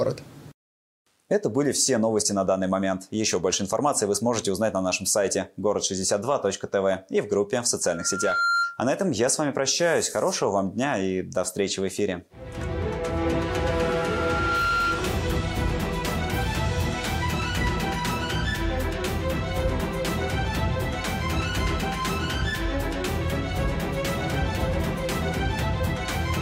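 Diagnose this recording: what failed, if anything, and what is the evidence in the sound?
A pure whistle at 1.4 kHz swells up twice: from 7.86 to 8.86 s, rising over about half a second to sit roughly 5 dB above the programme, and again from 13.70 to 15.22 s, building more slowly over about a second to around the same level as the programme. This is loudspeaker feedback squeal, arising in the acoustic and analogue path, where a microphone hears its own loudspeaker and loop gain at 1.4 kHz tops unity, so that tone regenerates until the loop is broken.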